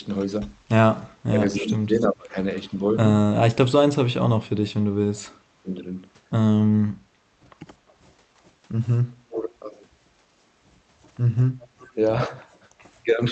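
Speech carried over a call path, with its top end stopping near 8 kHz, and two recurring faults. An echo leak is heard at 0.21–2.61 s, 7.88–9.54 s and 11.61–12.89 s: a delayed copy of the talker returns about 320, 356 and 373 ms late, roughly 15 dB below the speech at first, then a faint 35 and 30 dB down, most likely from a far-end loudspeaker whose echo canceller let residue through. A spectrogram shows faint duplicated harmonic traces trailing the originals by that lag. Speech suppressed in double talk appears at 1.17–7.21 s, 9.28–9.5 s and 11.95–13.2 s, likely the canceller ducking both voices while confused by overlap. The first span loses about three seconds in pieces, dropping by as much as roughly 35 dB, while the later dips are brief, around 20 dB and then slight. These show as chunky waveform gaps and dimmed high-frequency bands.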